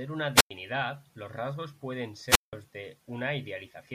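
An analogue radio link fading out caused two wireless microphone squelch dropouts. At 0.35–0.51 s, static rises and the receiver's squelch mutes about 0.1 s of speech. At 2.27–2.53 s, after "los rasgos pueden", it cuts out for about 0.17 s.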